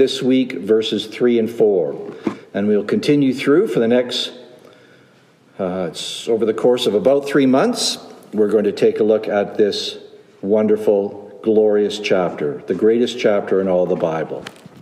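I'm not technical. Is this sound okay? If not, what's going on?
No. From about 6.67 to 8.67 seconds the sound turns thin, bright and hissy-edged. That is pre-emphasis left on: the top end was deliberately lifted, as CDs once did, and the matching step that lowers it back was skipped. Unlike added background hiss, nothing new appears. The existing sharp, high sounds simply get louder and spittier. Unlike a muffled fault, the fullness is missing because the treble overwhelms it.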